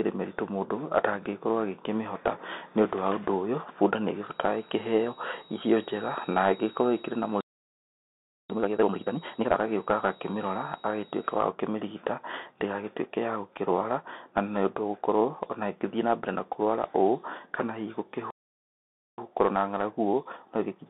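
A speech recording that has come through a Bluetooth CVSD headset codec for its whole length. CVSD sends a single up-or-down bit per sample and adapts its step size, and the dull, boxed-in sound fits a 64 kbps CVSD link. Only a narrow band of roughly 250 Hz to 3.7 kHz survives, so the speech is thin and muffled. Sibilants turn scratchy, loud bright moments break up where the step size cannot keep pace, and a grainy hiss sits under everything.

From 4.18 s to 11.48 s a feedback whistle is present. The likely cause is a loudspeaker-to-microphone loop running right at the edge of instability, which holds a single tone at about 3.8 kHz without letting it build. It sounds like a thin, steady whistle only a little quieter than the speech, wavering slightly in level.

Playback stalls twice, from 7.41 s to 8.50 s (about 1.09 s) and from 18.31 s to 19.18 s (about 0.88 s). The likely cause is the player running dry of data or its thread being held up. 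Each time, the audio cuts out abruptly mid-flow and stays silent for that span before resuming.

Each stall is followed by time-compressed catch-up, where the player trims its backlog by dropping small slices and cross-fading over the joins. From 8.50 s to 9.58 s the speech runs at double speed. From 19.18 s to the end it runs about 1.15 times faster. In both stretches the pitch stays put, but the delivery sounds rushed.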